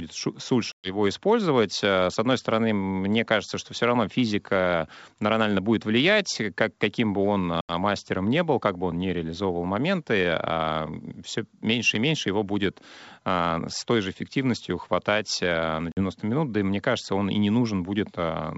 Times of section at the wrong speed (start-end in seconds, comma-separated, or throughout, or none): none